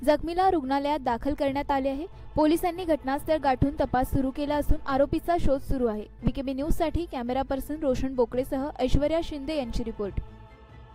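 A call bitrate drop runs from 2.61 to 7.95 s, turning the audio coarse and muffled for about 3 s at worst. That fits an encoder cut from roughly 128 to 26 kbps. The sound degrades without breaking up, unlike packet-loss gaps or dropouts.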